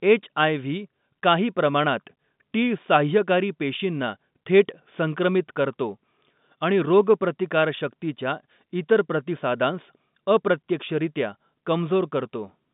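Nothing here goes wrong: it's ordinary telephone-band speech, carried in G.711 mu-law at 64 kbps, with the sound sitting between about 150 Hz and 3.7 kHz and nothing getting through above roughly 3.8 kHz, just as a normal phone line would deliver it.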